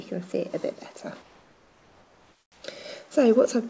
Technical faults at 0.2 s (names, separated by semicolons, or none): none